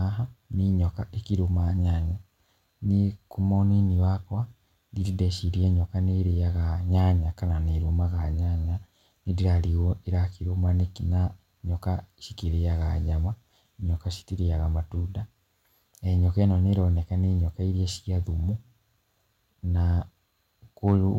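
Near the end, from 20.87 to 20.96 s, the speech shows hard clipping. Peaks exceed the system's limit by about 2 dB and are cut flat, adding a brief crackle.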